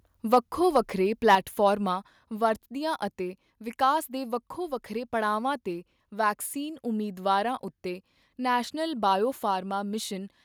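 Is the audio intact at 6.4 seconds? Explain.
Yes, at 6.4 seconds the speech runs through intact, with no dropout, click, distortion or other audible fault at that moment.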